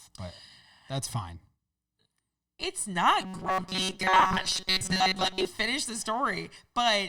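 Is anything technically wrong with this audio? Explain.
Yes. From 3.21 to 5.48 s the speech becomes a robotic sound from repeated short buffers, a rigid metallic buzz at 188 Hz. The likely cause is audio arriving too seldom, so most of that stretch replays a tiny slice, about a 5.3 ms buffer, while real audio is skipped.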